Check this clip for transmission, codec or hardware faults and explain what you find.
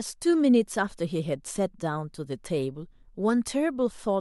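Nothing in the speech points to a fault anywhere along the chain.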